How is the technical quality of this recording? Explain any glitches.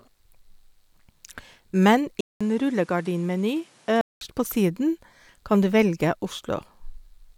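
The recording has one clear fault, a stretch where the input switched to a poorer device. From 2.21 s to 4.21 s the speech loses its top end, with nothing above 12.2 kHz, and drops roughly 5 dB in level. A new noise floor appears, around 30 dB below the speech, and a 200 ms gap of silence marks the changeover. This is likely the system moving capture to a different microphone, whose narrower band, altered tone and own hiss make that section sound duller and quieter until the original input returns.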